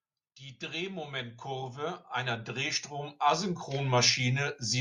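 From 0.59 s to 4.55 s the automatic gain is rising: the gain control judged the input too quiet and kept turning it up, adding about 16 dB over nearly four seconds. The speech and the background noise swell together, so the room seems to creep closer along with the talker getting louder. On a waveform the envelope widens steadily across that span; on a spectrogram the whole band, including the gaps between phrases, brightens evenly.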